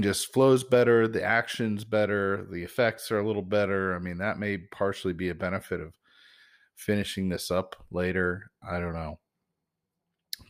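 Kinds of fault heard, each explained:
No audible faults present.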